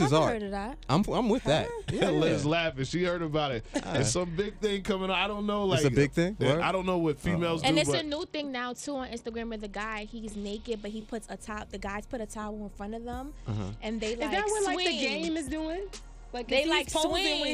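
From 2.37 to 4.53 s, 7.87 to 10.86 s and 13.34 to 16.57 s the sound goes through a Bluetooth SBC bit pool drop. With the link congested, the encoder starved the frames of bits, which fits a fall from a bit pool of about 31 to about 10, near 77 kbps. The treble dulls and a gritty grain rises. A spectrogram shows the upper bands going dark in each span, with speckled quantisation noise below.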